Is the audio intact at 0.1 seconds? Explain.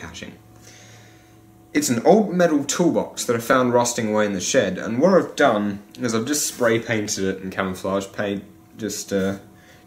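Yes, the audio is intact at 0.1 seconds, with nothing disrupting the sound at that moment.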